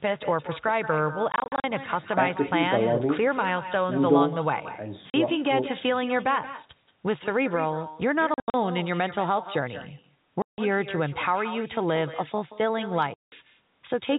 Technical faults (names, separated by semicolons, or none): echo with no canceller; packet loss filled with silence